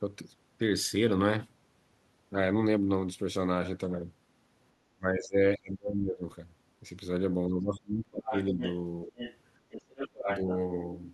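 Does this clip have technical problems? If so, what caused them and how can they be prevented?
Yes. Speech suppressed in double talk at 4.96–5.38, 5.57–6.23, 7.47–8.34, 8.51–8.59 and 9.05–9.19 s: the speech drops by up to about 30 dB, likely because the echo canceller mistook overlapping talk for echo. Tuning the canceller for better double-talk detection, or using a headset, prevents this.

The other side's voice leaking through at 8.27–8.76, 9.18–9.37 and 9.71–10.55 s sits about 5 to 10 dB below the talker, likely loudspeaker echo the canceller left unremoved. Headphones or lower playback volume would stop it.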